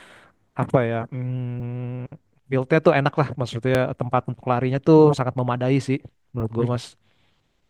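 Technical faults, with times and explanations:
1.6, 3.75, 5.18 and 6.4 s: dropped buffer (overrun). Each is a slight forward jump in the speech with no gap: roughly 10 ms skipped at 1.6 s, a few milliseconds elsewhere. Likely the input wasn't read before hardware overwrote it, splicing the edges together.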